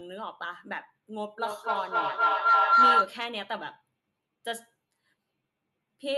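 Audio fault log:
1.38–3.21 s, feedback howl: a tone near 1.5 kHz builds as the microphone-to-loudspeaker loop gains level on each pass, narrowing to the frequency the loop favours, with the loop repeating about every third of a second, peaking about 12 dB above the speech.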